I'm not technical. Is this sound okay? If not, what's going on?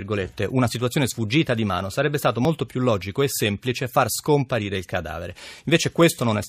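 No, there's one small glitch. At about 2.45 s, right after "di mano sarebbe stato" and just before "più logico e semplice", you'll hear a tiny click or skip. That's an overlap between stream segments. The audio arrives in chunks, and two neighbouring chunks claimed to cover the same moment. The player trimmed away the supposed duplicate, but that sound wasn't actually repeated, so a few milliseconds went missing and the audio jumps.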